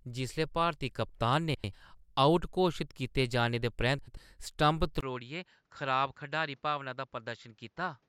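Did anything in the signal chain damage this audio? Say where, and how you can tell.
Yes. Two stretches show frames out of order, at 1.55 to 1.74 s and 3.98 to 4.17 s, which points to packet reordering on the network ahead of the codec. Each stretch plays with its two halves of about 93 ms swapped, which fits runs of four codec frames exchanged. The result is a garbled flutter, but no time is lost. A spectrogram shows the formant tracks jumping out of sequence at three joins per event.

From 5.01 s to the end, the sound turns duller and boxier. The likely cause is the input switched to a poorer device at the converter or driver stage. There is a silent gap of about 20 ms at 5.01 s, and after it the level drops by about 10 dB and a new hiss sits roughly 40 dB below the signal. On a spectrogram, energy stops sharply at 7.6 kHz from that point, with a raised, even noise floor and a visible notch at the switch.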